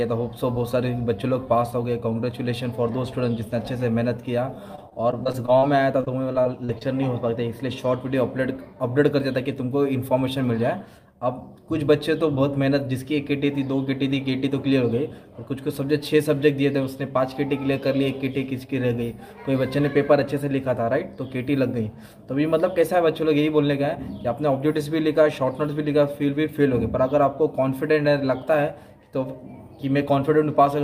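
Two bursts of choppy, robotic-sounding audio run from 4.75 to 5.64 s and again from 6.00 to 6.83 s, with small pieces missing. This is repeated packet loss (robotic sound). Packets dropped or arrived late several times in quick succession, leaving holes of up to about 40 ms. Each hole was filled by extending the preceding sound, covering roughly a sixth of each stretch.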